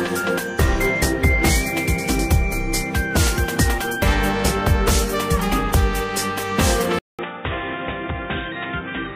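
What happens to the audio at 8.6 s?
At 8.6 s the sound is within a stretch from 6.99 s to the end where the input has likely switched to a poorer device. After a 200 ms gap, nothing above 3.8 kHz remains, so the audio turns dull and boxy, drops roughly 10 dB, and gains a faint new noise floor.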